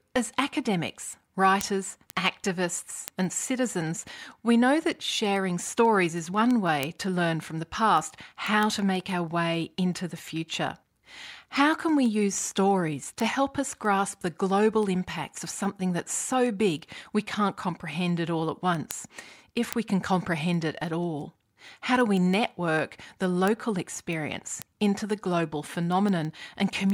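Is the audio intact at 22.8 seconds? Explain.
No. Word clock ticks run from 0.14 to 26.90 s: an unlocked clock, off by roughly 150 ppm, slips one sample about every 0.15 s, giving steady sharp clicks seen as evenly spaced thin vertical spectrogram lines and short waveform spikes.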